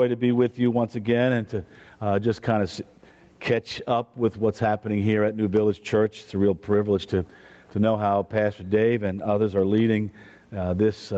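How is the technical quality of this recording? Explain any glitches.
The recording suffers from constant level instability, with the level pulled down under the louder sounds from start to finish. Nothing is heard above 8 kHz, which fits a call codec such as Opus running at around 24 kbps.

Gain pumping runs throughout the clip. Each loud sound pulls the level down sharply, with the gain swinging by roughly 20 dB. The likely cause is input gain set far too high, with a fast limiter or compressor clamping every peak. The result is a squashed sound where loud and quiet passages sit unnaturally close together.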